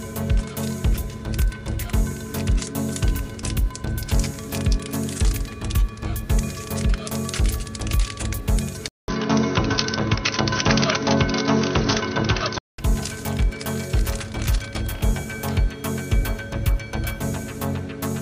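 At 8.88 s a 200 ms gap opens, then the sound turns dull and boxy until 12.78 s, likely because the input switched to a poorer device. A spectrogram shows nothing above 6.2 kHz and a new noise floor roughly 30 dB down, while the waveform level stays similar.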